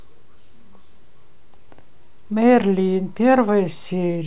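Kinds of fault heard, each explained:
No faults can be heard anywhere in this recording.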